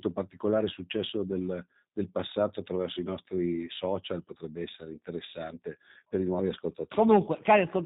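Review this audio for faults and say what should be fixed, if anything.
G.729 codec damage runs through the whole clip and is plainly audible. The speech has nothing above 4 kHz and sounds rough and synthetic, which points to an 8 kbit/s G.729A path. That codec does not carry the waveform itself. It rebuilds each 10 ms frame from a vocal tract filter, a pitch predictor and a few fixed pulses, so fine detail and high frequencies are lost. To prevent it, record or transfer the audio through a wideband or lossless path instead of a narrowband VoIP leg.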